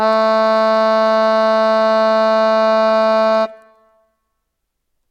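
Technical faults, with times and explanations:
No technical faults can be heard in this music.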